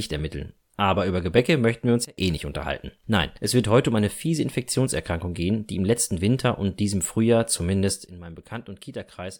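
Sudden gain jumps at 2.05 to 2.18 s, between "möchten wir uns" and "eh nicht unterhalten", and from 8.06 s to the end of this speech clip: level and background noise drop together, about 23 dB and about 12 dB, likely from gain applied without a ramp.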